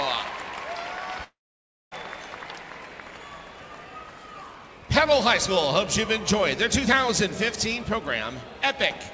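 A long network dropout is the likely cause of the break from 1.24 to 1.94 s. About 0.68 s of audio never arrives. The receiver stretches the last sound into a fading buzz or hiss, then leaves roughly 0.58 s of silence before sound resumes past the missing part, still with nothing above 8 kHz.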